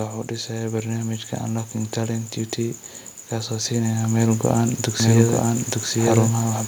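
From 0.29 to 1.16 s, and again from 3.32 to 4.52 s, automatic gain rising lifts speech and background together by about 4 dB, then about 6 dB. The waveform envelope and spectrogram brightness ramp up smoothly. From 5.00 s to the end, a doubled audio track appears abruptly: a full-band copy of the speech, about as loud as the original, trails it by roughly one second. It is likely a second, slower capture path. The spectrogram shows the same patterns repeated a second later, with no decay smear.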